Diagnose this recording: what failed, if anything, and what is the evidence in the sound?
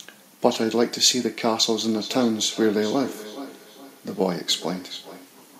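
Call processing failed: a feedback echo between two devices runs from 1.95 s to 5.35 s, with each phrase returning roughly every 0.4 s and peaking about 15 dB below the speech. A second device's loudspeaker feeds this microphone, beyond the local echo canceller's reach. A spectrogram shows fainter copies of each syllable at that spacing.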